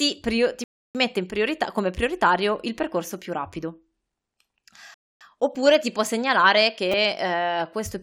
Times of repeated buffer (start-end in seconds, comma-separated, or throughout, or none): 5.55, 6.92